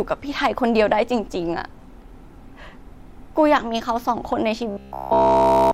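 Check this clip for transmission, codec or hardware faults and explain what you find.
One fault near the end of the speech: robotic sound from repeated short buffers, 4.71 to 5.73 s. Audio likely stopped arriving, so a roughly 15 ms slice looped almost continuously, imposing a rigid, metallic 66.7 Hz buzz.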